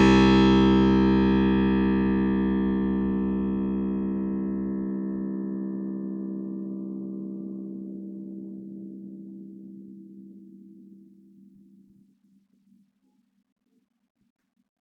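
Listening to this music recording, nothing technically wrong stands out.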